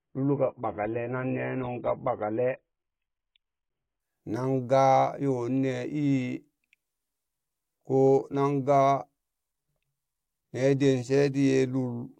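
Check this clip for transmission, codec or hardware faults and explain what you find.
There is one fault, an adaptive stream starting at a low bitrate. From 0.0 to 4.0 s the speech sounds dull and smeared, with nothing above 3.8 kHz, before abruptly sharpening with no gap. The player began on a low-quality version, which fits roughly 16 kbit/s AAC, then stepped up to about 96 kbit/s.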